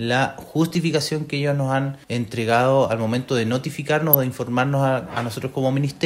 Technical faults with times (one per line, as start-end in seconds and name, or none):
0.71-0.75 corrupt frame decoded
4.13 corrupt frame decoded